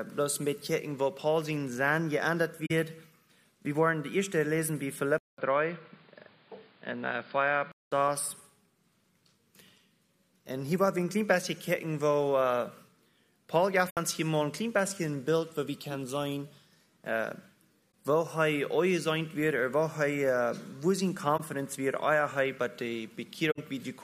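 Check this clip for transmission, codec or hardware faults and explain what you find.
Two kinds of fault are audible: five short concealed frame errors and one stretch where the input sounds like a poorer device.

Corrupt frame concealed: at 2.66 to 2.71 s, 13.89 to 13.98 s, 17.94 s, 21.37 to 21.41 s, and 23.51 to 23.59 s. Damaged data reached the decoder, which detected it and filled the gap itself. The lengths fit one to three lost frames.

Input switched to a poorer device: from 5.18 to 7.92 s the sound turns dull and boxy. A silence of about 200 ms marks the change. Nothing reaches above 4.9 kHz. A different background noise appears, well below the sound. The overall level stays about the same. The likely cause is the system switching its input to another microphone or a headset call profile. The full band returns at 7.92 s.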